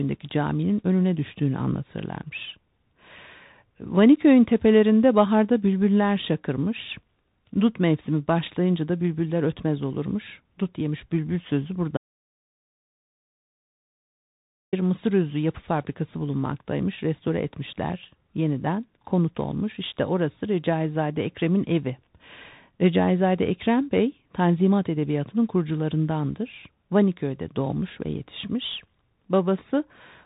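From the first second to the last, the speech carries the sound of a Bluetooth CVSD headset codec. The coder sends just one bit per sample saying up or down, with an adapting step, which fits a 64 kbps link. Nothing reaches above about 3.8 kHz, so a spectrogram shows a hard ceiling there with empty space above. Loud sibilants overrun the step and turn scratchy, and a fine granular hiss sits under everything.

At 11.97 s the audio drops out to silence and stays out until 14.73 s, roughly 2.75 s in all. Whatever was said in that stretch is lost. The gap is silent with no room tone, seen as a flat line on the waveform and a blank band on the spectrogram, cut off abruptly at both edges. The likely cause is the input link or device failing while recording carried on.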